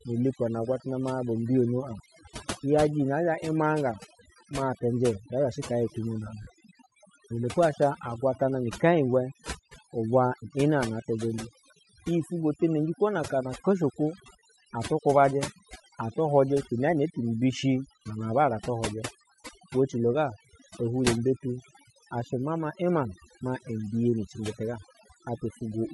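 From start to end, overdone noise removal has pushed the background to near silence speckled with twinkling artefacts. A spectrogram shows a dark floor dotted with isolated flickering bins, and weaker harmonics are gouged away wherever they approached the noise estimate.

Throughout, the speech also carries a breathy, grainy edge in its upper range, plainly audible. This is likely Bluetooth LC3 compression at around 48 kbps. Upper bands appear as noise-filled blocks rather than clean harmonic detail, and the coding grid fits 10 ms frames.

At 1.99 s, lost LE Audio frames cause a brief smear lasting about 10 ms. The decoder repeated the previous spectrum with scrambled phase, so a spectrogram shows a single narrow, blurred column where the harmonic lines dissolve into noise.

From 6.42 to 6.47 s, a longer loss of 50 ms, roughly five frames' worth, turns the speech into a noisy smear that fades. 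On the waveform the envelope decays across the gap, and the spectrogram shows a diffuse patch with no harmonic structure.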